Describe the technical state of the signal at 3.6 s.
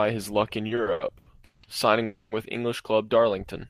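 At 3.6 s the speech signal is intact, with no audible fault at that moment.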